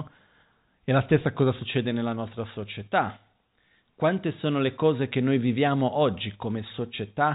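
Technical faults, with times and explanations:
No faults found; the speech arrives over a WebRTC call path with no content above 4 kHz, which fits narrowband G.711 mu-law coding.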